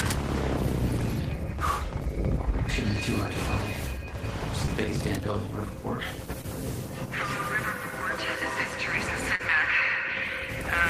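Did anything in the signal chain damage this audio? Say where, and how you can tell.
Yes, at the network stage: short concealed packet loss at 4.65–4.69 s, 6.41–6.46 s and 9.35–9.41 s, with 20, 20 and 40 ms missing. Each brief smear or wobble comes from the receiver continuing the previous sound, then blending back. On a spectrogram those bands look frozen or smeared.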